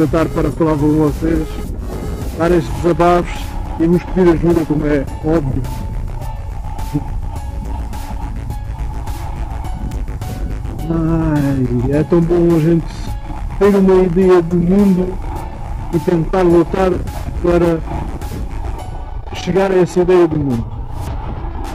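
At 9.92 s there's a single sharp snap sitting right on top of the audio, an electrical switching spike that comes and goes in a few milliseconds and peaks somewhere around -15 dBFS. It's one brief burst. The likely cause is a nearby switch, motor or static discharge throwing off a tiny arc that the audio line picked up.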